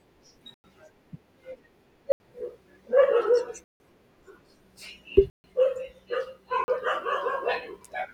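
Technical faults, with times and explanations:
0.54 to 6.68 s, block of digital silence: The speech drops to dead silence five times, at 0.54 to 0.64 s (about 99 ms), 2.12 to 2.20 s (80 ms), 3.64 to 3.80 s (160 ms), 5.30 to 5.44 s (140 ms) and 6.64 to 6.68 s (40 ms). Each time a block of samples became zeros. The signal stops and restarts with no fade. The longer gaps are clear holes.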